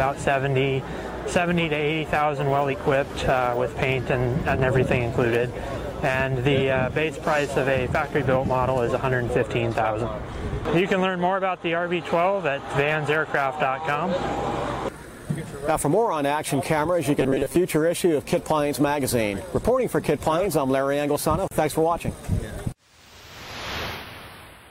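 From 17.21 to 17.56 s, robotic sound from repeated short buffers: a rigid metallic buzz at 134 Hz, likely from repeating a roughly 7.5 ms buffer, with about half the audio replaced. At 21.48 to 21.51 s, a gap at a join of encoded pieces: a 34.5 ms gap with smeared edges, left by untrimmed encoder delay and padding.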